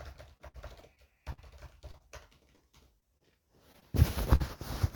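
From 0.37 to 4.42 s, repeated packet loss (robotic sound) breaks the audio thirteen times, each hole patched by stretching the preceding sound for up to 62 ms. The result is choppy, with pieces missing. Unlike one isolated dropout, the gaps keep recurring across four seconds.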